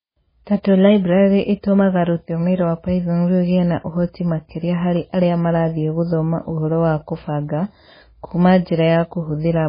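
From start to finish the speech carries heavy damage consistent with MP3 compression, likely from encoding at a very low bitrate, which fits roughly 16 kbps. Nothing remains above 5 kHz, so sibilants lose their edge, and quiet spectral detail flickers in and out between frames, giving a watery, swirling texture with smeared consonant onsets. That frame-to-frame warble sets it apart from a simple low-pass filter, which would dull the top end while leaving the rest steady.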